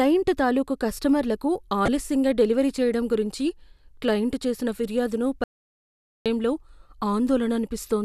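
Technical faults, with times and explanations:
1.85–1.88 s, corrupt frame decoded: right after "తాలూకు కస్టమర్లకు" a short squeaky burst cuts across the speech for about 26 ms. Bits inside the compressed stream were damaged, and the decoder still rendered the affected frames, a couple of them judging by the duration. Misread spectral codes and gains placed energy at frequencies that do not belong to the voice. That produces the brief synthetic chirp and noise rather than a clean gap.
5.44–6.26 s, audio dropout to silence: just after "గురించి క్లయింట్ చేసిన ఫిర్యాదును" the speech stops abruptly mid-flow. About 0.82 s of silence follows, with no room tone or noise floor, and then the speech resumes abruptly. The likely cause is that the input signal was lost, through a link failure, disconnection or unintended mute, while the recorder kept writing silence. Whatever was spoken during that stretch is unrecoverable.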